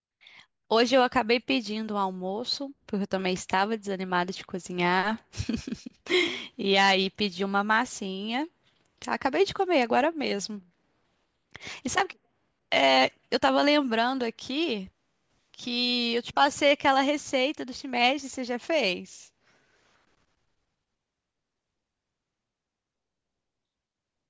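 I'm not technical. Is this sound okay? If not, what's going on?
Yes, the recording is technically sound, with nothing going wrong in how the audio was captured or delivered.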